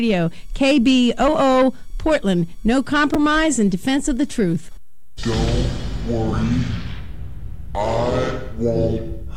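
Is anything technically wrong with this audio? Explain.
Yes. There are two brief chunks-out-of-order glitches, at about 3.14 s and 5.02 s. In each, a slice of roughly 5.33 ms arrives one slot late and plays after the slice meant to follow it. No audio is lost, but the swap creates three hard joins, heard as a tiny jumbled stutter. A waveform shows abrupt discontinuities at the splice points, and a spectrogram shows thin broadband vertical lines at each.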